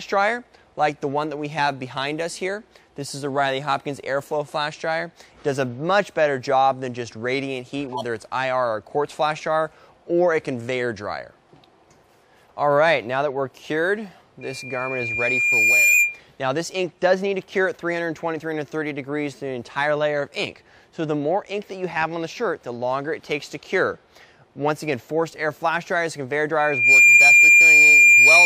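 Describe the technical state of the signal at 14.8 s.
At 14.8 s the signal is in a loudspeaker feedback squeal that runs from 14.41 s to 16.20 s. A microphone is picking up its own loudspeaker, and around 2.4 kHz the loop gain has passed unity, so that frequency keeps reinforcing itself. It is heard as a single tone that swells over roughly a second and a half and ends up around 10 dB above the rest of the sound before it stops.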